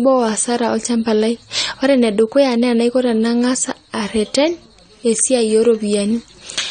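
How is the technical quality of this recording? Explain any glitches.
The quality is noticeably compromised, with plainly audible codec damage running through the whole speech clip. It sounds like AAC compression, likely low-bitrate AAC-LC around 32 kbps. The encoder throws away everything above about 9 kHz and starves the remaining bands of bits, so the audio comes out dull and smeared, with a warbly, fizzy edge on sibilants and held sounds.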